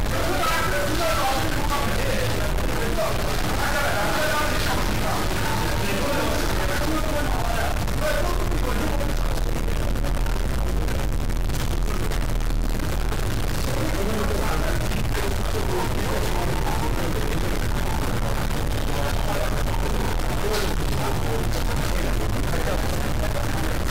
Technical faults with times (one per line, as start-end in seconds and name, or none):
0.00-23.91 stuck bit